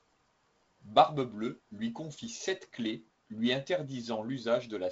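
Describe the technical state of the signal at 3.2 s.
At 3.2 s the speech is intact, carried by G.722 wideband telephone coding that leaves nothing above about 7.8 kHz and adds a light, low-level noise consistent with its reduced-bitrate mode.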